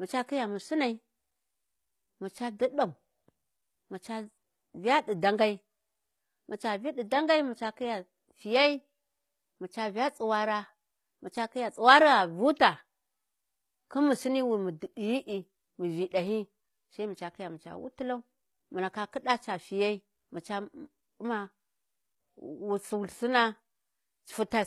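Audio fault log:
Throughout: HE-AAC compression, likely, and plainly audible. The treble is rebuilt, copied up from the lower bands rather than coded, so its harmonics don't line up and the s sounds come out gritty and lispy. It fits a low bitrate around 24 kbps.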